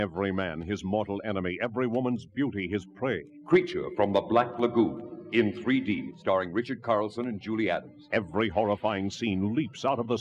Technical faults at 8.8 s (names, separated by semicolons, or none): none